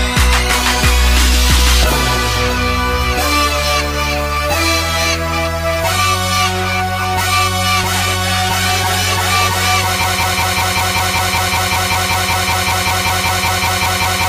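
The audio plays normally until 10.04 s. From there it turns into a broken-record loop. A fragment about 0.19 s long repeats exactly, back to back, 22 times, until the clip ends. Whatever should have played after 10.04 s is lost. The likely cause is a stalled player, encoder or stream resending its last buffered piece.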